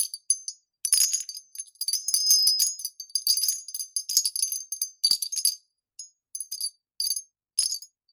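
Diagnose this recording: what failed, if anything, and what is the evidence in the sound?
Loudspeaker feedback squeal in the analogue acoustic loop: a 5.1 kHz tone swells over about a third of a second from 1.99 s, peaking around 5 dB above the sound, until 2.92 s.

Time-stretched section from 6.49 s to the end: the pace jumps to 1.81 times, rushed, with pitch unchanged, likely from playback-stage software dropping short segments to shorten it.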